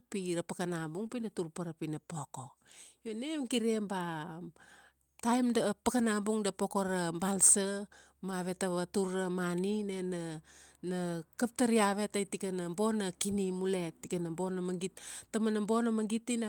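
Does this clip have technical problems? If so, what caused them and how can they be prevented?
Yes, there are two kinds of network fault here.

First, a short concealed packet loss at about 1.07 to 1.11 s. Roughly 20 ms of audio never arrived in time, so the receiver extended the preceding sound to cover the hole and then faded back into the real signal. You hear it as a quick smear or wobble. A steadier connection, or a slightly deeper jitter buffer that waits longer for late packets, would prevent it.

Second, there are six lost packets rebuilt from error correction, each a single 20 ms frame, at 3.53, 6.77, 8.31, 10.85, 12.25 and 14.19 s. The 10.85 s one falls right after "ra mani nena", the 12.25 s one right after "kap tar iavet tai", and the 14.19 s one right after "tikana bona kini mule". In each case the next packet carried a low-bitrate backup copy, so there's no gap, just a brief rougher, noisier patch. 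Reducing packet loss on the link (wired rather than congested Wi-Fi, less competing traffic) would prevent it.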